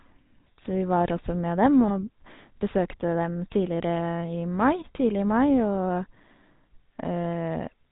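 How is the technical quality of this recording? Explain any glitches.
The technical quality is poor. The speech is coded by a low-bitrate phone codec throughout, and one short glitch breaks through near the start.

The GSM full-rate codec runs for the whole clip. It models the vocal tract and excites it with sparse, regularly spaced pulses. Nothing above 4 kHz survives. The damage is plainly audible as a buzzy, gravelly roughness. That character fits the 13 kbps full-rate standard.

GSM bit errors strike from 1.88 to 1.91 s. Corrupted bits reached the decoder and scrambled the filter, pitch or gain values for about one frame. The spectrum bends or the level jumps briefly. It is heard as a sharp squawk or pop.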